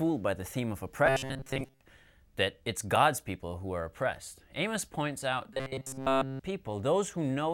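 From 1.06 to 1.81 s and again from 5.53 to 6.40 s, the speech goes robotic, a rigid metallic buzz locked at 134 Hz. That's likely robotic sound from repeated short buffers, a roughly 7.5 ms chunk looping while new audio is skipped. The first stretch is mostly repeats, the second entirely.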